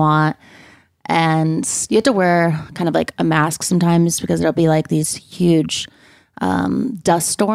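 A speech recording with nothing technically wrong with it.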